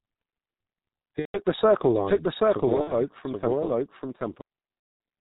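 Throughout, the speech carries heavy G.723.1 codec damage. Nothing survives above 4 kHz, and because the voice model is refreshed only every 30 ms frame, consonants smear and the tone turns muffled and hoarse. That roughness fits the 6.3 kbit/s mode. A simple low-pass filter would dull the sound without adding this grainy, frame-rate hoarseness.

Three bursts of VoIP packet loss concealed by the speech codec follow, at 1.20–1.39 s, 2.81–2.93 s and 4.79–5.00 s. The longest of these lasts about 0.21 s, and their lengths point to roughly five, two and seven lost frames. In each gap the decoder keeps repeating its last pitch and filter while lowering the gain. The result is a stretched, fading buzzy tone or coloured noise, and in the five- and seven-frame gaps the sound is muted from the third lost frame on. Recovery is not instant, since the voice stays weak and distorted for a short while after each gap. 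That sagging tail distinguishes it from a hard dropout or mute, which would simply cut and return.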